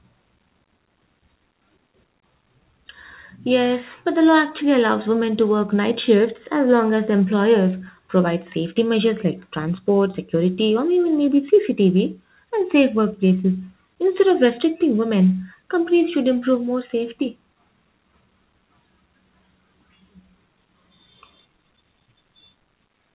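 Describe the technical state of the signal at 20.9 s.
At 20.9 s the audio is intact, with no fault present, and the call path is passing the speech as expected, with nothing above 4 kHz as fits a G.711 mu-law call codec.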